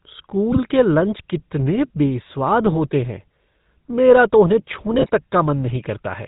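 The whole clip runs through what sounds like the GSM full-rate codec, which fits a 13 kbps stream. The vocal tract is modelled and driven by a thinned-out pulse excitation, with nothing above 4 kHz, so the speech has a plainly audible buzzy, gravelly roughness.

Then come GSM bit errors, first from 0.52 to 0.59 s and again, longer, from 4.94 to 5.10 s. Corrupted filter, pitch or gain values reach the decoder, so those frames warp in spectrum or jump in level, giving short squawks and gargly pops.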